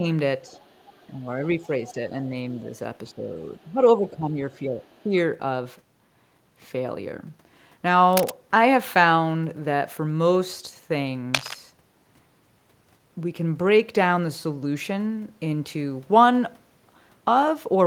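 Speech with two echo-control problems in the first five seconds and two later bursts of handling noise. Speech suppressed in double talk occurs from 0.00 to 0.04 s, from 1.57 to 2.15 s, from 3.12 to 3.31 s, and from 3.66 to 5.13 s. In each of these stretches the voice sags or thins. The deepest dips are around 10 dB, and the one near 2 s is shallower, around 5 dB. The likely cause is an echo canceller that could not tell this talker from the far side playing over the loudspeaker and turned everything down together. On a spectrogram these spans show up as short vertical bands where the harmonics fade and the upper frequencies drop away. On the waveform the envelope caves in. The other side's voice leaking through appears from 0.55 to 1.07 s, briefly from 1.87 to 1.94 s, and from 4.95 to 5.03 s. These are faint fragments of a second voice, mostly far below the main speech, with the one near 1.9 s the least buried. 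This is likely residual loudspeaker echo the canceller failed to remove. On a spectrogram it appears as weak, broken harmonic traces that do not line up with the main voice. Cable scratch noise occurs from 8.13 to 8.31 s and from 11.34 to 11.55 s. Each is a dense, uneven rustle only slightly quieter than the speech, likely from a worn connector or cable being moved and its contact resistance fluctuating. On a spectrogram each burst is a broadband smear of irregular vertical streaks, and on the waveform it is a jagged cluster of spikes.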